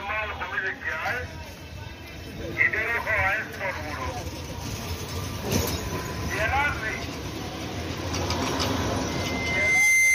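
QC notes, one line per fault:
9.07 to 10.15 s, loudspeaker feedback squeal: a pure tone at 2.1 kHz rises out of the sound over roughly 0.7 s and runs to the end of the clip, settling at around 10 dB above the program. The microphone is hearing its own loudspeaker, and at this frequency the loop gain passes one, so the tone keeps feeding itself. On a spectrogram it is a thin, bright horizontal line at 2.1 kHz. The waveform envelope swells over about 0.7 s, then holds to the cut.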